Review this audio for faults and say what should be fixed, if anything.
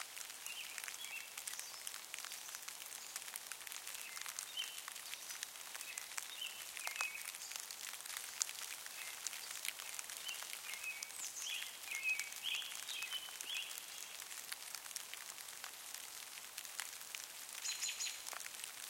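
A second capture path or an edit that holds two out-of-step copies has likely mixed the same audio in twice, giving a doubled audio track from 8.08 s to 10.84 s. A full-band copy trails the original by roughly one second at about 5 dB quieter, with no decay or room colour, so each event repeats as a flat echo that starts and stops abruptly at those times. Route each source through a single capture path and check edits for overlapping duplicate regions.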